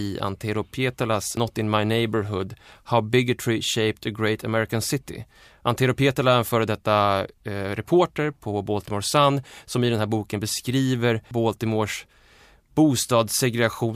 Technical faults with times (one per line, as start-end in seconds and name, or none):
1.37 damaged data in a compressed stream
11.31 damaged data in a compressed stream